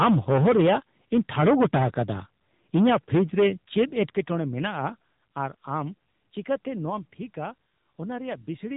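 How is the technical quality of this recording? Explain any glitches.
The technical quality is poor, with one fault running throughout. The speech has passed through an AMR narrowband mobile codec at a low bitrate, consistent with a 7.4 kbps mode. Nothing above about 3.8 kHz survives, and the sparse pulse-driven vocal model makes the voice plainly buzzy and synthetic.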